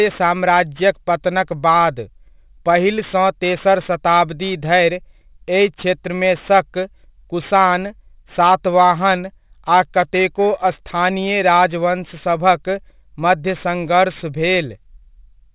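Speech runs throughout with gritty, metallic sibilants and a harsh haze that presses right up to a hard ceiling at 4 kHz. That is aliasing. The audio was apparently brought down to a much lower sample rate, consistent with 8 kHz, without an anti-aliasing filter first. Content above 4 kHz folded back into the band as unrelated, inharmonic tones, sitting roughly 25 dB below the speech for the whole clip.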